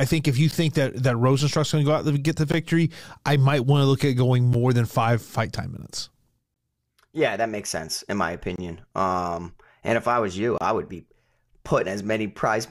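Gaps between stream segments break this speech clip at 0.51, 2.52, 4.53, 6.54, 8.56–8.58 and 10.58–10.61 s. They are hard-edged silences of about 10 to 28 ms recurring every 2 seconds, which fits 2-second segments whose timestamps leave small holes the player fills with silence.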